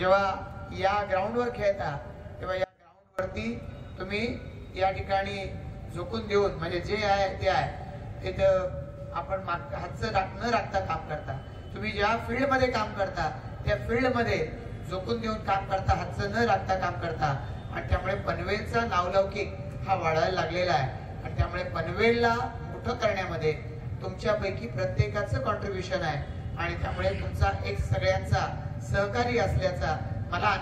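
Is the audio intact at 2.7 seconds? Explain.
No, 2.7 seconds falls inside an audio dropout to a faint residue that runs from 2.64 to 3.19 s, a bit over half a second. The signal snaps away mid-flow and snaps back just as abruptly, with none of the shape of a natural pause or fade. What's left in the gap is a faint trace, roughly 25 dB below the normal level. That likely means the wanted signal was lost briefly while the path after the break stayed live.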